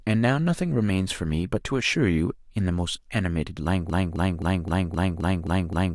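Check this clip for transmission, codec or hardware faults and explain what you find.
One fault appears: a broken-record loop. From 3.90 s to the end of the speech, a 0.26 s fragment repeats exactly, back to back, eight times. The likely cause is a stalled player or stream resending its last buffered piece. The audio due in that span is lost.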